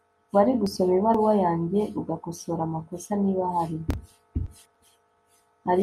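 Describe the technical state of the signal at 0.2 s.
The signal at 0.2 s is intact, with no audible fault at that moment.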